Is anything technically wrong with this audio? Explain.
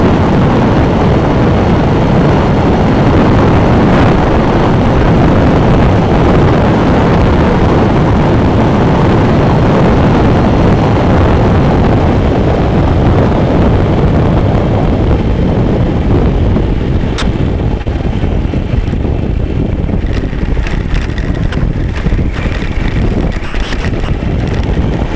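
Yes. There are several short dropouts and one choppy passage near the end.

Sound dropped by the voice detector occurs three times: 17.18 to 17.22 s, 21.52 to 21.54 s, and 22.36 to 22.38 s. The sound briefly gives way to flat synthetic noise, for 40 ms at the first point and 20 ms at the others. The likely cause is the sender's voice detector mistaking quiet sound for background and sending comfort noise instead.

Short concealed packet loss occurs at 17.82 to 17.87 s. About 40 ms of audio never reached the decoder in time. The receiver covered roughly 30 ms of the gap by extending the preceding sound, then blended back in. This is heard as a brief smear or wobble.

Sound chopped by the voice detector runs from 23.44 to 24.08 s. About 280 ms within that stretch is replaced by comfort noise. The detector likely switched on and off repeatedly, so the sound turns choppy. The call codec's band limit also keeps everything below 8 kHz.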